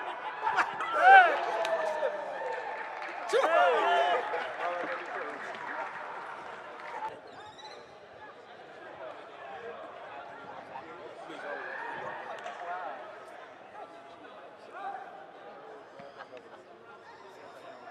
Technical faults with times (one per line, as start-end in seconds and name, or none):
none